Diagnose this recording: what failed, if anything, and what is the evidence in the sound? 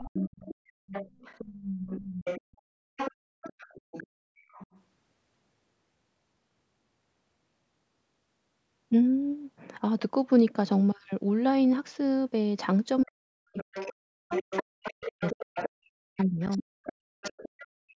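A second, fainter voice sits under the talker from 0.0 to 2.41 s, 2.96 to 4.67 s and 13.01 to 17.65 s, roughly 10 dB below the speech. This is the other side's voice leaking through at the call-processing stage, likely because the echo canceller left loudspeaker pickup in the microphone signal.

The talker's speech dips from 0.05 to 0.51 s and again from 13.04 to 17.82 s, by about 35 to 40 dB at worst, for roughly 3.4 seconds in all. This is speech suppressed in double talk: with both sides talking, the echo canceller likely turned everything down.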